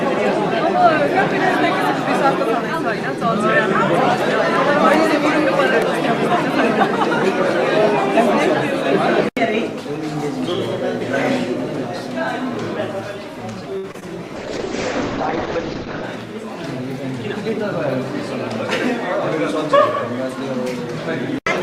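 At 13.77 to 13.86 s the audio hangs on a held, slightly buzzy sound for about 63 ms before resuming where it left off: a short stall from a late packet, where the jitter buffer ran dry and the receiver stretched the last sound while waiting. Two brief smears follow at 13.92 to 13.96 s and 14.00 to 14.03 s, each covering about 20 ms of lost audio. This is short concealed packet loss, patched by extending the preceding sound. From 14.37 to 16.08 s the audio turns rough and muffled, with the top end cut from about 20 kHz down to 8 kHz. That is a call bitrate drop, which fits the encoder falling from around 48 to 8 kbps and sitting at its lowest for about 1.7 s. Overlapping its end, from 15.85 to 16.17 s, the sound runs hurried at roughly 111% speed with unchanged pitch. This is a jitter buffer speed-up, trimming a few hundredths of a second of pitch periods to shed excess buffered delay.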